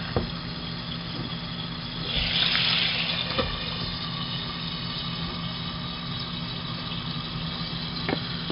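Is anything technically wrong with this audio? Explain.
Yes. 4-bit ADPCM compression affects the whole clip. Each sample is stored as a coarse 4-bit step away from a predicted value, with the step size adapting as it goes, so the coding error rides along with the signal as a gritty hiss under every loud moment, and sharp attacks smear where the step can't grow fast enough. The damage is heavy. Nothing survives above 5.3 kHz, which dulls the top end and fits a low-rate stream of roughly 44 kbps.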